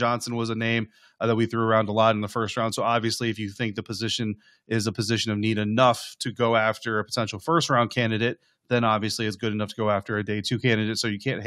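Nothing stood out as a technical fault on listening to this speech recording.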